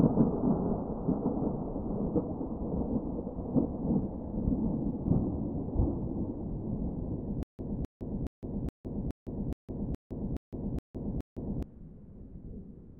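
Stutter with silent gaps, from 7.43 s to 11.63 s: the same 0.26-second burst of sound plays about ten times, each followed by roughly 0.16 seconds of dead digital silence, so the fragment returns every 0.42 seconds at a steady, mechanical pace. This is likely a stalled player or stream that replayed its last buffered fragment at each retry and then ran dry. Whatever sound belonged in that span never plays and is lost.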